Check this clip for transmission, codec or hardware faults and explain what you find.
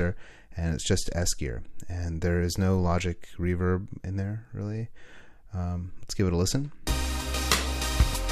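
Nothing to report: no transmission, codec or hardware fault can be heard anywhere in the clip.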